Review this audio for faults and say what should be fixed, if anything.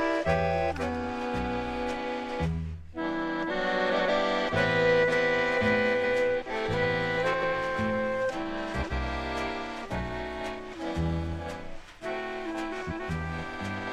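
Frames out of order at 3.89–4.09, 5.94–6.12, 7.33–7.49, 8.72–8.93 and 12.71–13.10 s. Neighbouring blocks of about 93 ms (186 ms in the last) play swapped, giving a garbled flutter. These appear as abrupt waveform discontinuities and vertical spectrogram seams. Reorder packets by sequence number in the jitter buffer before decoding.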